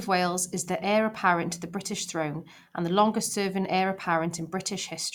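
Speech, with no technical fault to be heard anywhere in the recording. There is nothing here to time or trace to a cause.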